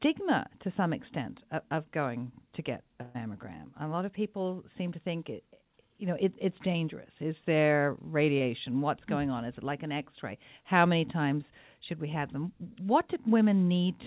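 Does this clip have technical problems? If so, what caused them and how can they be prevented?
Yes, there are two dropouts in the network path.

The first is a burst of packet loss from 3.02 to 3.16 s, right after "of going to get". About 120 ms of audio never arrived in time, so the receiver stretched the last bit of sound across the hole for roughly 124 ms, letting it fade as it went. You hear a held, dying smear instead of silence, and the speech then picks up further along with that chunk simply gone. To prevent it, give the link more headroom or add redundancy such as FEC or RED so a run of lost packets can be rebuilt.

The second is a short concealed packet loss at 8.38 to 8.42 s. Only about 20 ms went missing, and the decoder patched it by extrapolating from the audio just before, then crossfading back into the real signal. It comes across as a quick little wobble or smear in the speech. 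To prevent it, reduce jitter and loss on the network, or allow the jitter buffer a bit more depth so late packets still make it in.

The call path itself is narrowband, with nothing above 4 kHz, which fits G.711 mu-law at 64 kbps.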